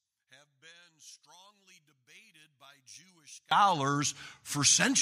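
From the start to 3.51 s, the speech collapses to a faint residue when the channels are combined to mono, dropping by about 29 dB. This points to one channel inverted: one side of the stereo pair likely has reversed polarity, so the centred voice, present equally in both channels, cancels on summing. All that survives is the small difference between left and right, heard as a faint trace of the speech.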